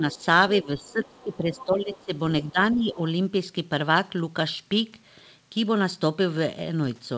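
From 0.0 to 0.21 s the speech dips by a few decibels, speech suppressed in double talk, likely the echo canceller turning down both talkers at once. A faint scrap of the other side's voice leaking through sits at 0.15 to 0.25 s, likely unremoved loudspeaker echo. From 0.61 to 2.12 s the suppression deepens to about 10 dB while a clearer leaked voice, about 20 dB below the speech, runs from 0.79 to 2.05 s. More leakage follows at 2.42 to 2.76 s, overlapping a further dip of about 10 dB from 2.51 to 2.98 s. Throughout, nothing comes through above 8 kHz, which fits a G.722 call path.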